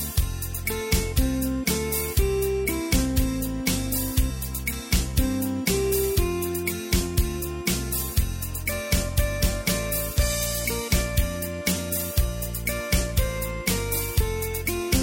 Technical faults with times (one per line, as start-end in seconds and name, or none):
none